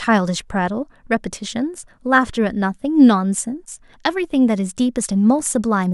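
From start to end, a resampler restarted on every block converts 44.1 kHz to 48 kHz in 20 ms chunks, so each edge gets a small error. This gives a 50 Hz buzz under the speech, with faint vertical spectrogram lines every 20 ms.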